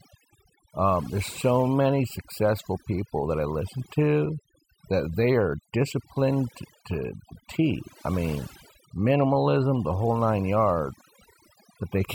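Overdone noise removal runs through the whole speech clip. A noise reduction stage set far too aggressively keeps pulling individual frequency bands down or shutting them off wherever they sit near its noise estimate. The background in the gaps drops and breaks up into twinkling specks, while the quieter components of the voice are stripped away along with it.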